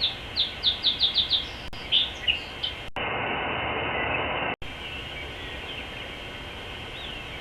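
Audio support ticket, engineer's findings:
Digital broadcast dropout at 1.68 to 1.74 s. Sound drops to silence for roughly 50 ms, then picks up again mid-programme. Whatever went out in that gap is gone. Probable component: receiver/decoder. It lost good frames, either from signal loss or failed checksums, and muted until clean frames arrived. A hole that short fits about two lost frames. Worth checking reception margin at that moment.

Input switched to a poorer device at 2.88 to 4.62 s. Brief silence of about 80 ms at the switch. After it, the sound goes dull and boxy with nothing above 3 kHz, and there's a new noise floor sitting roughly 40 dB under the signal. Level stays about the same. Likely cause is the system swapping to another mic or a headset call profile mid-recording. It then returns to full band at 4.62 s.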